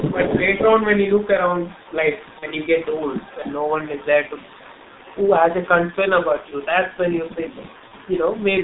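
Throughout the speech, the G.723.1 codec at 6.3 kbit/s confines the sound to roughly 150 Hz to 3.7 kHz. Heavy coding damage leaves it muffled and hoarse, and the consonants smear because the coarse 30 ms frames and slow model updates cannot track fast changes.

From 0.0 to 1.33 s, 1.58 to 1.94 s, 2.11 to 4.06 s and 6.29 to 6.67 s there is an echo leak: a copy of the speech returns about 250 ms late. It starts near 10 dB below the direct sound, then turns much fainter. The likely cause is a far-end loudspeaker whose echo canceller let residual pickup through.

At 2.39 to 2.47 s and 7.88 to 7.92 s, VoIP packet loss is concealed by the speech codec. Each gap fits a single lost 30 ms frame. The decoder stretches the preceding sound into a brief buzzy tone or coloured noise that fades, and the speech stays weakened for a moment afterwards.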